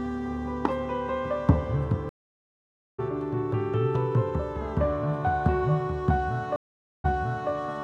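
Two stream reconnects occur. At 2.09 s the audio drops out for 893 ms, then a fresh decoder resumes about a second further on, skipping material. At 6.56 s a 481 ms gap ends with the server resending 464 ms, so the sound briefly repeats.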